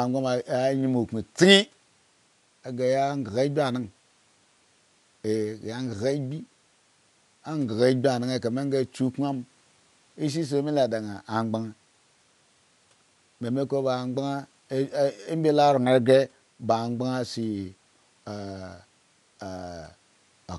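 A speech recording in which nothing stood out on listening, with only a low room noise sitting about 38 dB below the speech.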